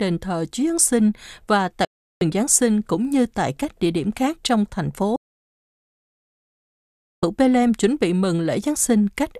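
Digital broadcast dropouts occur at 1.85 to 2.22 s and 5.16 to 7.23 s. The receiver stopped getting decodable frames and muted, so the speech cuts to silence within about 3 ms, leaving holes of 0.36 s and then 2.06 s. Everything transmitted during those gaps is lost.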